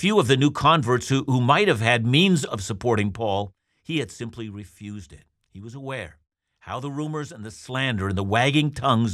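No technical faults are audible.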